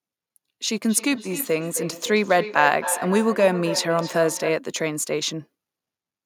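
From 0.87 s to 4.66 s the speech carries a feedback echo between two devices: a second device in the same room replays the far end, that microphone picks it up again, and neither echo canceller removes sound the other device played. Each word returns roughly a third of a second later, thinner and ringing, at most about 9 dB below the speech. Unlike room reverberation, which smears sound continuously, these are distinct repeats at a steady interval.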